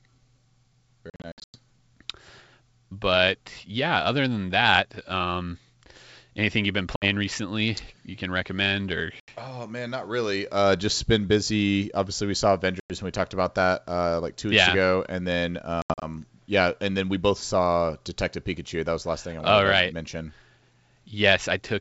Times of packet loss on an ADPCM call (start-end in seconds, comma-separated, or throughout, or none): 1.10-1.56, 6.96-7.05, 9.20-9.29, 12.80-12.92, 15.82-16.05